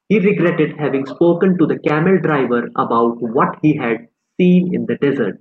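Nothing stood out on listening to this speech clip, which carries the ordinary character of a call connection.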